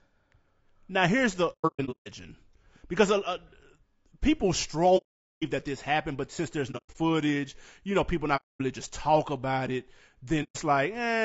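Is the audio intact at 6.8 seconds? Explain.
No. Right after "happened but since there's", from 6.71 to 6.96 s, there's AAC frame loss with muting: about 180 ms of audio goes missing, scattered across roughly 240 ms, with the longest hole around a tenth of a second. The decoder zeroed the spectrum of several lost frames, and the overlapping windows fade the sound out and back in, so you hear soft-edged dips rather than hard cuts.

On top of that, the whole clip carries plainly audible low-delay AAC compression, likely AAC-ELD at a rate that fits about 32 kbps. Squeezing the speech that hard makes it rough and grainy, with noise filling in between the harmonics and a top band that sounds lowered or synthetic.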